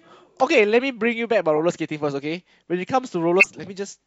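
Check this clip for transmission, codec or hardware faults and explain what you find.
Two corrupt-frame events mar this speech clip. The first, from 1.56 to 1.60 s, lasts about 40 ms, roughly two frames' worth, and peaks near -20 dBFS. The second, from 3.40 to 3.51 s, is longer, roughly four frames, and its error reaches close to full scale. In each case flipped bits in the compressed data were decoded without being caught, so misread gains and codes put energy at wrong frequencies. Each is heard as a short chirp, squeak, blip or burst of noise, the second stronger than the first.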